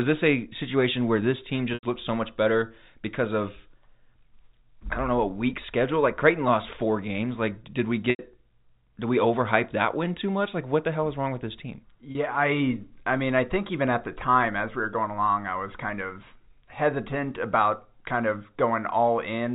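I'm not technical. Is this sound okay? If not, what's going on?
No. Packet loss with pitch repetition occurs at 1.74 s, 8.1 s and 12.12 s. Bits of the call went missing, so the phone repeated the last instant of speech to fill the hole. The 30 ms gap sounds like a brief buzzy hold. The two 90 ms gaps fade into silence before the speech returns.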